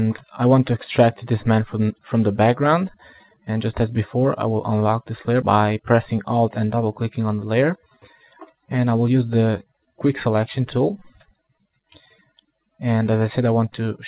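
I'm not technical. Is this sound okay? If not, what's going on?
Yes, it's fine: it has the narrow, muffled-at-the-top quality of an ordinary phone call, because the call line carries nothing above 4 kHz, and that's just how such calls sound rather than anything going wrong.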